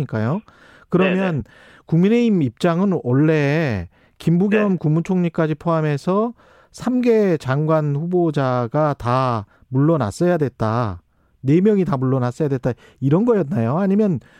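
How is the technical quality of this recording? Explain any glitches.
The recording has one audible glitch. From 1.40 to 1.42 s, compressed frames are skipped. About one frame, roughly 20 ms of audio, is lost. The jump fits a 23 ms frame.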